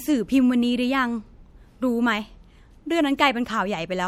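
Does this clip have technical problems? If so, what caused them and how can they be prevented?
Yes. MP3 compression damage is plainly audible across the whole clip, and it's likely down to the speech being encoded at a low bitrate, something like 64 kbps. With that few bits, the encoder drops quieter frequency components and they flicker in and out between frames, which gives the speech a watery, swirly edge. Nothing reaches above about 20.3 kHz, where the treble is cut. To prevent it, record and deliver in a lossless format, or encode MP3 at a much higher bitrate.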